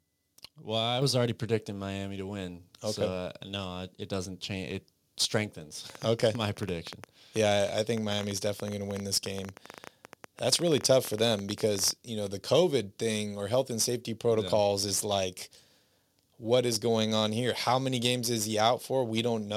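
A microphone volume step-up hits this speech recording at 1.02 s, where voice and background noise rise together by about 5 dB in a single instant. The call software judged the input too quiet and raised the device's capture volume in one jump rather than ramping it, so the room tone lifts along with the talker and the change is audible as an abrupt step. A train of clicks then runs from 5.9 s to 11.9 s: around seventy similar pulses at roughly 11.7 per second, spaced unevenly, each peaking a few decibels above the speech. They tick through the pauses as well as over the talking, which points away from the speech itself and toward something injecting pulses into the signal path, likely electrical interference from nearby equipment or a faulty connection or power supply.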